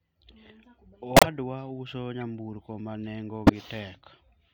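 At 1.16 to 1.26 s, 2.21 s and 3.47 to 3.53 s the speech carries corrupt frames that were decoded anyway. Damaged bits in each compressed frame made the decoder rebuild energy at the wrong frequencies, giving short chirps and noise bursts spanning a few frames each. The first and last are loud, peaking near about −10 dBFS, while the middle one is a faint blip. A spectrogram shows abrupt broadband or misplaced blocks matching frame edges, and the waveform shows sudden spiky bursts.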